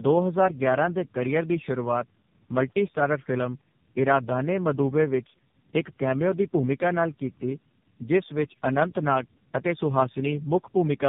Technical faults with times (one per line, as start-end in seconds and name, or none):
0.00-11.08 tandem speech coding